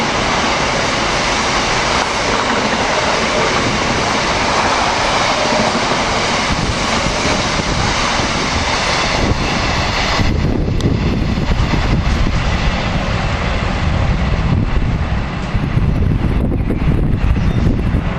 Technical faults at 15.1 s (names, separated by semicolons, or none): Bluetooth SBC bit pool drop